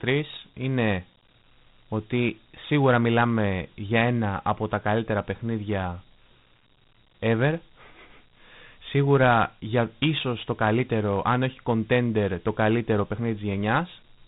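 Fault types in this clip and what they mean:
Dialogic VOX ADPCM: the speech has been stored as 4-bit adaptive differential PCM, the telephony format used for phone menus and voicemail, at a data rate that points to 32 kbps and so to 8,000 samples a second. Nothing remains above about 3.9 kHz, giving a narrow, boxed-in band. Each sample is coded as a small step from a prediction, and the coarse steps leave a plainly audible gritty hiss that rides along with the speech throughout.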